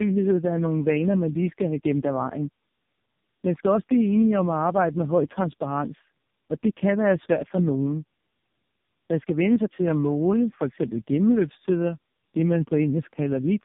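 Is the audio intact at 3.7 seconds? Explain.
No. At 3.7 seconds, as everywhere else in the clip, the speech sounds rough, muffled and warbly, with nothing above about 3.7 kHz. This is tandem speech coding: the signal was decoded and re-encoded at each link boundary, and the degradation points to three low-rate speech codecs in a row, plausibly AMR-NB and G.723.1 types, joined by G.711 links. Each coder inherits the previous one's errors and adds its own, so the damage compounds.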